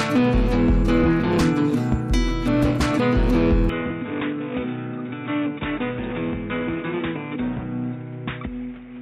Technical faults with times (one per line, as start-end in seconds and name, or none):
3.69-9.01 input switched to a poorer device